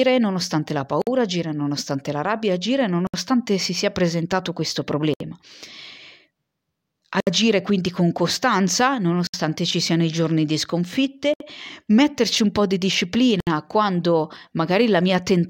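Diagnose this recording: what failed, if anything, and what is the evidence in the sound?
The codec stage failed: there is a gap at a join of encoded pieces. The speech stops seven times, at 1.02, 3.07, 5.14, 7.20, 9.27, 11.34 and 13.40 s. The first, after "nonostante la", lasts 53 ms. The rest last 67 ms, one falling after "quindi con costanza". The speech then resumes where it stopped. The two-second spacing marks separately encoded chunks joined untrimmed. Each keeps its encoder start delay and final-frame padding.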